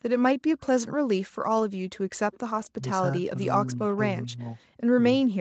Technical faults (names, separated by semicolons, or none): echo leak; speech suppressed in double talk